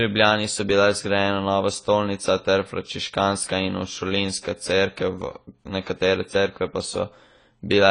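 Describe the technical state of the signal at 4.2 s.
At 4.2 s the speech carries AAC compression damage that runs through the whole clip, not a local event. The sound is dull and plainly smeared, with nothing above 10 kHz, a cut-off that points to AAC-LC at a low bitrate around 24 kbps. The encoder is likely quantising the spectrum coarsely and discarding the top band. A spectrogram would show a flat ceiling at 10 kHz; the waveform looks intact.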